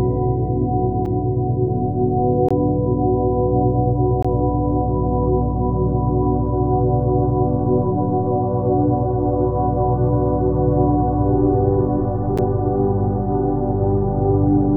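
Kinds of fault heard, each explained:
Block of digital silence: the sound cuts to silence and back with no fade, unlike a smoothed dropout. The 5 and 10 ms gaps at 1.05 and 12.38 s are ticks; the 20 ms gaps from 2.49 and 4.23 s are short holes.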